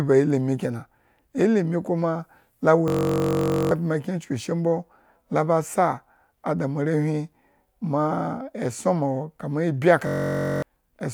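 A system hang loop occurs from 2.88 to 3.71 s, right after "kena ilimi kuma la", and again from 10.07 to 10.62 s, after "kama ibyi". Each time the system stalled while the sound hardware kept replaying one 21.33 ms slice of its ring buffer, which fits a 1024-sample buffer. That rapid repetition is heard as a steady buzz at about 46.9 Hz. About 0.7 s of speech is lost in the first hang, with speech resuming at "kyen chuku eshir mbola", and about half a second in the second.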